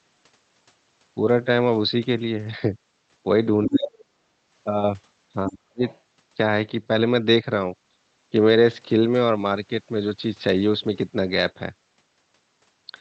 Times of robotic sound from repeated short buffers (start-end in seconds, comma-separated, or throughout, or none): none